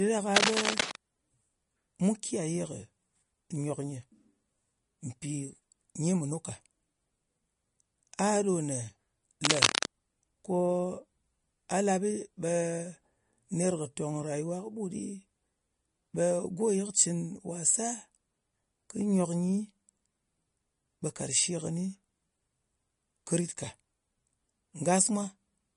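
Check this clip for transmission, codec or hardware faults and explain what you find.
Two things stand out: codec damage across the whole clip and two short bursts of scratching.

From start to finish the speech has plainly audible MP3 compression artefacts, likely from a low bitrate, which fits something around 40 kbps. Nothing comes through above 10.6 kHz, so the top end is dull. Starved of bits, the encoder drops weak frequency lines that flicker on and off between frames. That gives a watery, swirly texture and smeared attacks.

Cable scratch noise shows up at 0.36 to 0.96 s, roughly as loud as the speech, and again at 9.44 to 9.86 s, a bit louder than the speech. It's likely a worn cable, connector or control being moved, so the contact resistance jumps around and dumps ragged noise bursts into the signal. You hear brief scratchy rustling over the speech.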